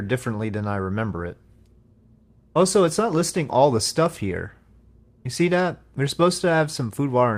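Nothing is technically wrong with this audio, and no faults can be heard anywhere in it.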